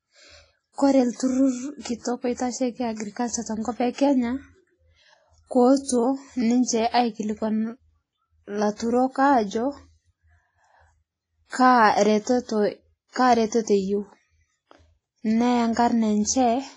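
Speech with heavy WMA compression damage throughout: the audio rings and sounds washy, with a hiss that swells and fades with the signal, and nothing remains above 10.6 kHz. This is likely long-block transform coding at a low bitrate, consistent with about 24 kbps.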